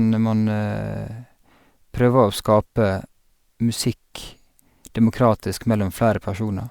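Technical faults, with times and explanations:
No technical faults are audible in this speech.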